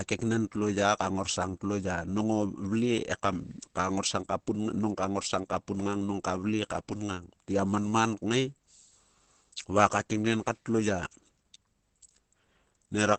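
Right through, the speech stops dead at 8.3 kHz and sounds muffled and hoarse, likely Opus compression squeezed into its low-rate speech mode.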